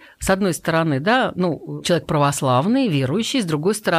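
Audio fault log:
No faults are audible anywhere in this speech recording.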